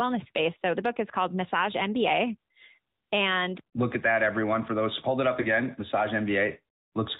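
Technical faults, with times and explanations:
throughout AMR narrowband mobile codec: the speech sounds thin and boxed-in, with nothing above 4 kHz, and a plainly audible buzzy, synthetic edge. It fits AMR-NB at a mid-rate mode near 10.2 kbps, rebuilding the voice from a vocal-tract model and sparse pulses.
5.42 to 5.47 s lost AMR speech frames: a brief dip or warble interrupts the speech, then it resumes rough for a moment. This fits a single lost 20 ms frame, which the decoder covered by repeating the previous pitch and vocal-tract settings at reduced gain.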